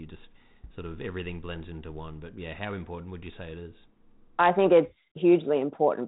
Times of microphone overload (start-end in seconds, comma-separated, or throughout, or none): none